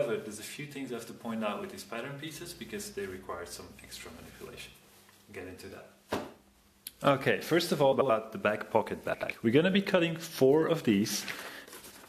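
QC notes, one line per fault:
2.36–4.74 s: video or display buzz. A screen or video feed leaks into the audio. It gives a 60 Hz field-rate buzz with hash above it, roughly 30 dB below the signal.
7.92–8.10 s and 9.13–9.31 s: frames out of order. Two neighbouring blocks of 85.3 ms each play swapped, which fits four-frame runs. This causes a garbled flutter, and no time is lost.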